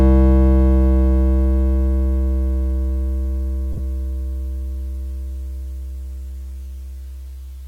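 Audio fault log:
3.73–3.79 s, lost LE Audio frames: The music breaks up in several short gaps spread over about 60 ms, with the longest run near 20 ms. About 37.5 ms is missing in total, which fits five 7.5 ms frames. The LC3 decoder fills each gap by repeating the last spectrum with random signs. Steady tones therefore blur into a brief noisy smear. The gaps are short, so the sound never fades toward silence.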